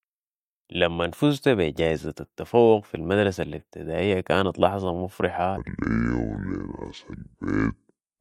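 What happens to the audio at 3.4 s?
Nothing goes wrong at 3.4 s; the audio runs through that moment intact, with no dropout, click or other fault.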